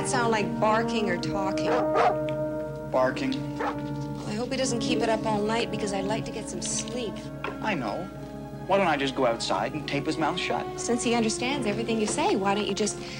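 Nothing stood out on listening to this audio.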